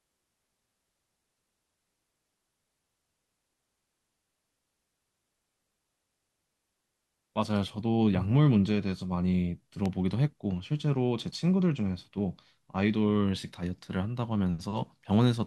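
At 9.86 s a single sharp snap cuts across the speech, a brief crack lasting about a millisecond and peaking at around -20 dBFS. It has the character of an electrical switching spike. A nearby switch, motor or static discharge likely threw off a short arc, and the audio line picked up that burst of energy, laying the click on top of the speech.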